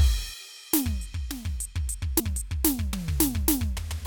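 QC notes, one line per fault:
2.18–2.20 s, compressed frames skipped: the music lurches forward, losing roughly a tenth of a second. Whole compressed frames were never decoded, so playback jumped ahead.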